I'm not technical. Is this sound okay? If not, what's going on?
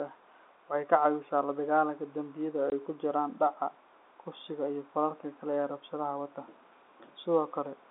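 No. At 2.7 s the speech drops out for a split second, leaving a tiny hole. This is packet loss filled with silence: one small piece of the call, about 20 milliseconds long, never arrived, so the receiver played nothing in its place. The narrow, phone-like sound comes from ordinary G.711 telephone coding.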